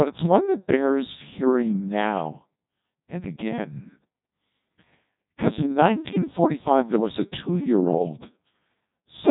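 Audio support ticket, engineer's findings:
Codec 2 vocoder damage, whole clip. Speech robotic and buzzy, heavily degraded. Parametric synthesis, not waveform coding: only pitch, voicing, energy and spectral envelope survive, rebuilt from sine waves. Sound points to roughly 1.2 kbit/s mode. Spectrogram: nothing above 3.8 kHz, harmonic stacks unnaturally regular, unvoiced stretches smeared into noise. Waveform: shape unlike original, evenly periodic pulses in voiced parts. Probable component: digital-radio link or gateway.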